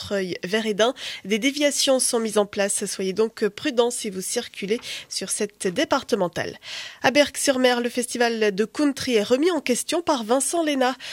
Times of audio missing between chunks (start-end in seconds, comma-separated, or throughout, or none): none